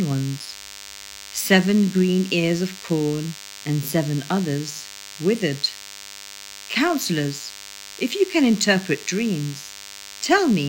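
Throughout the speech runs DECT cordless phone buzz: a nearby handset or base bursts every 10 ms, and the audio circuitry rectifies it into a thin, steady 100 Hz buzz roughly 20 dB below the speech. A spectrogram shows evenly spaced horizontal harmonic lines; the waveform carries regular spikes.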